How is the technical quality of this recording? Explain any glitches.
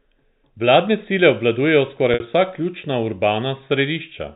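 One glitch stands out in this speech clip, which is carried over G.711 telephone coding that passes nothing above 4 kHz. From 2.14 to 2.20 s the sound briefly freezes into a held, buzzy tone before the speech picks up again. That is packet loss with pitch repetition. About 60 ms of audio went missing, which fits three 20 ms packets, and the receiver bridged the gap by looping the last pitch period and fading it instead of leaving silence.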